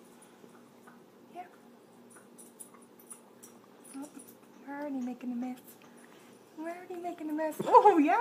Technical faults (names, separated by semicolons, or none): compressed frames skipped